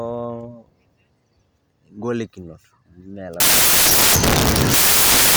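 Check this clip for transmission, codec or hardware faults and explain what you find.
One fault is present: samples built from the wrong bytes. It begins at 3.40 s and runs to the end of the clip. The reader assembles each sample's bytes incorrectly, through a one-byte offset, a swapped byte order or a wrong alignment. The fast-changing low bits then land in the high part of each value. The speech is replaced by loud, harsh broadband noise for those final two seconds. The noise is close to white on the louder sounds.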